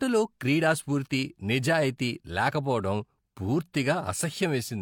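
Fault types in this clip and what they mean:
Nothing stood out on listening to the speech here.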